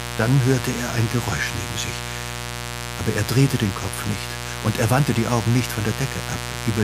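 A steady mains buzz runs throughout. Switching spikes twice in every 60 Hz cycle add harmonics up to several kHz, giving a raspy buzz roughly 10 dB below the sound.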